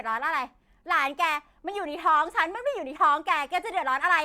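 No technical faults detected.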